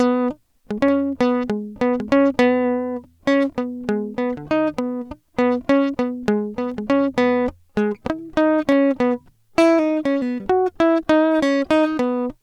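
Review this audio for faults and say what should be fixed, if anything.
Four sharp, isolated clicks occur in the music at 0.89, 3.49, 6.72 and 8.72 s. Each is most likely dropped samples: a fraction of a millisecond missing, so the waveform steps abruptly to a later value. Prevent this by giving the capture or playback path enough buffer headroom to avoid underruns.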